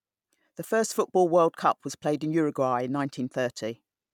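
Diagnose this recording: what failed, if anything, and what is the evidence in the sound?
Listening to the speech in this recording, nothing stood out as a fault at any stage of the chain.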